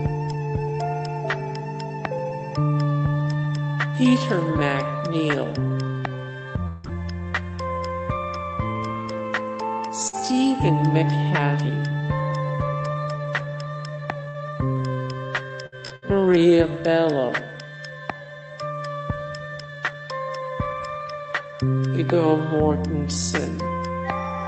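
Between 6.67 and 6.87 s the stream likely suffered a long network dropout, with a delay jump of around 40 ms. For about 160 ms the receiver stretches the last sound into a fading tail, and about 120 ms of audio never returns. Right after, from 6.84 to 6.90 s, a lost packet is rebuilt from error correction: the next packet carried a low-bitrate copy, so 60 ms plays without a gap but sounds rougher and noisier. At 10.08 to 10.16 s a burst of packet loss leaves about 60 ms missing. The decoder covers it with about 50 ms of continued, fading sound, and the audio resumes further along. A second rebuilt stretch follows from 10.13 to 10.19 s, again 60 ms of coarser, noisier sound from the embedded copy. From 14.28 to 16.38 s repeated packet loss punches three holes, the longest 60 ms, about 180 ms missing in all. Each is patched by continuing the previous sound, giving a choppy texture across roughly 8% of that stretch, with around a fifth of a second also rebuilt from redundancy. 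Throughout, the Opus call path cuts the highs at 8 kHz.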